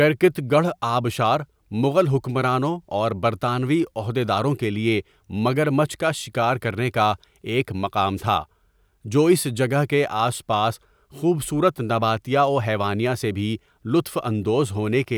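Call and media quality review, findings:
Short swish of static at 8.17–8.23 s: wireless microphone noise hit. Analogue FM radio link fades as reflections cancel, letting receiver noise rise over the speech briefly.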